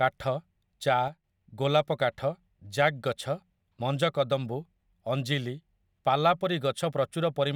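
At 1.08 s there's a sudden gain jump: the speech and its background noise both drop by about 6 dB at once, then snap back at 1.24 s. The likely cause is a digital gain change applied instantly, with no ramp.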